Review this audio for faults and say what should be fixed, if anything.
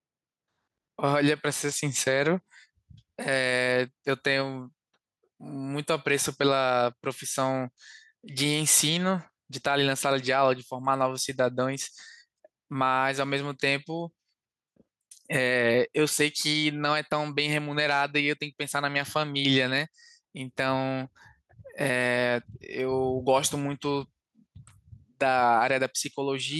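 Gain pumping runs throughout the speech: the gain ducks under every loud syllable, swinging by roughly 5 dB, which squashes the dynamics. The likely cause is input gain set too high, with a fast limiter or compressor clamping it down. Lower the microphone gain and slow or relax the limiter so it no longer rides every peak.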